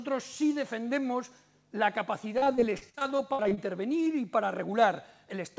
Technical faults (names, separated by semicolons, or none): repeated packet loss (robotic sound)